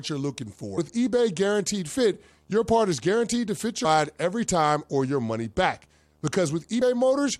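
Throughout the speech runs a video or display buzz: a screen or video cable is coupling into the audio path, leaving a steady 75 Hz buzz at the picture's field rate with fine hash above it, sitting roughly 40 dB below the speech.

Damaged data in a compressed stream breaks in at 0.77 s, 3.84 s and 6.81 s. Corrupted bytes make the decoder misread frames and hunt for the next valid header, so each point gives a brief chirp or blip.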